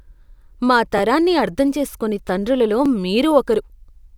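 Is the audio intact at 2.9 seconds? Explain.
No, there's a repeated buffer at about 2.86 s, right after "అర్థం చేసుకోని తండ్రులలో". New audio arrived late, so the last roughly 11.6 ms chunk played once more, which fits a 512-sample buffer. With a chunk that small you hear a quick click or buzz rather than a stutter, and essentially nothing is lost.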